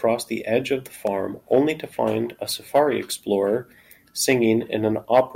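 A nearby switch, motor or static discharge likely arced for an instant and the audio line picked it up, producing an electrical switching spike at 1.07 s in this speech clip, between "the edge of the" and "only to find a". The discharge is heard as a sharp snap lasting only a few milliseconds, laid over the speech rather than interrupting it. It peaks at around -20 dBFS.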